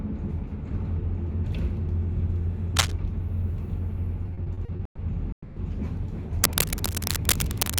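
Cable scratch noise at 2.76–2.93 s: dense, uneven bursts, somewhat louder than the sound, likely from a worn cable or connector being moved while its contact resistance fluctuates. It returns from 6.44 s to the end at 7.80 s, this time about as loud as the sound. Repeated stalls (stutter) run from 4.23 to 5.00 s: nine hold-ups, the longest 130 ms, together filling 310 ms, about 40% of the span. Late packets kept emptying the jitter buffer, so the receiver stretched the last sound each time. The audio drags and stutters, with nothing lost. A call audio freeze at 5.32–5.58 s adds a 240 ms gap, likely from packets held up in transit. The last sound carries on and fades into about 90 ms of silence before the audio resumes where it stopped.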